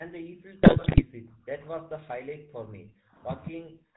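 From the start the speech carries the GSM full-rate codec: a buzzy, gravelly roughness from pulse-driven excitation, audible throughout. On a spectrogram, energy stops sharply at 4 kHz, and voiced stretches show coarse, smeared harmonics instead of clean striations.

From 0.0 to 3.24 s the speech is pulled down in uneven chunks, likely speech suppressed in double talk as an echo canceller ducks the talker while the far side speaks. Across roughly three seconds the waveform envelope sags and gaps open, with dips reaching about 40 dB.

Between 0.62 and 1.03 s GSM bit errors break through as squawks, pops and gargling, which points to an error rate near 5 percent corrupting filter, pitch and gain values. The spectrogram shows frame-sized blocks of warped spectra and sudden level spikes.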